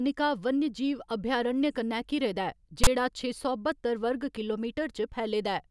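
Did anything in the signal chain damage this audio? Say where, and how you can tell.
Yes. The damage happened at the storage and playback stage, where the file is parsed. Between 2.84 and 2.87 s, a burst of about 30 ms cuts into the speech. It is a loud, harsh rasp with abrupt edges, and its waveform sits offset to one side. That is file tags played as audio. A block of text metadata was read as sample values. Character codes cluster in a narrow range, so they decode to a lopsided, buzzy rasp rather than clean noise.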